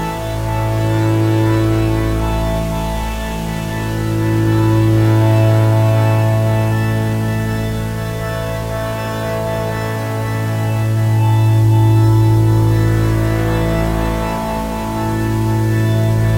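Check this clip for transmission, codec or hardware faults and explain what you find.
One fault runs through the whole clip: grainy, signal-following distortion that turns quiet passages gritty and makes the faintest parts sputter or drop out, with the grit sitting only about 25 dB below the sound. This is likely low bit depth without dither: rounding to about 6 bits leaves errors that track the waveform instead of forming a smooth noise floor.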